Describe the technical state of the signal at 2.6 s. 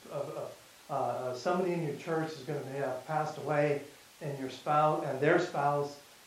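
At 2.6 s the speech signal is intact, with no dropout, distortion, glitch or other technical fault.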